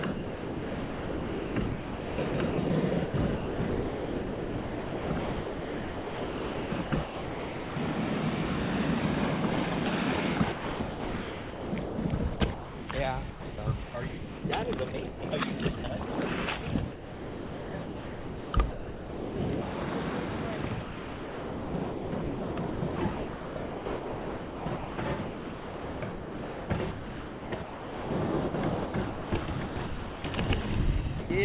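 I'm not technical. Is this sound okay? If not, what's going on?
No. Sound chopped by the voice detector, at 0.12–7.96, 10.38–15.22, 16.92–19.36 and 20.82–30.66 seconds: the sound keeps cutting in and out, with stretches swapped for artificial hiss. The likely cause is the sender's voice detector repeatedly mistaking real sound for background and pausing transmission.

Sound dropped by the voice detector, at 15.78–15.84 and 31.2–31.3 seconds: brief moments vanish into steady hiss, likely because the detector briefly judged them to be background.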